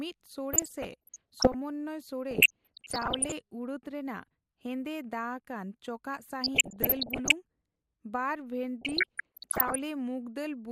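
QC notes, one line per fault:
0.53–1.54 s, DAB burbling: watery blips over the speech, as bit errors near half a percent corrupt MP2 sub-band levels frame by frame.
2.31–3.32 s, DAB burbling: denser, muddier bubbling and chirps, as a bit error rate around one percent throws individual sub-bands up and down in level.
6.44–7.32 s, DAB burbling: moderate squelching and gurgle across the speech, from bit errors somewhat under one percent slipping past error correction into the audio data.
8.81–9.80 s, DAB burbling: heavy bubbling with chirps, as errors around one percent corrupt scale factors so single sub-bands jump for up to a frame.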